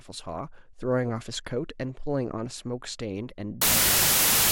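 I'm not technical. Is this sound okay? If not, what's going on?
No. From 3.62 s to the end at 4.52 s, there is a wrong sample width fault. The stored numbers are read in the wrong-sized pieces, which fits 32-bit audio read as 16-bit. The speech sinks into loud noise and plays at half speed, sounding lower.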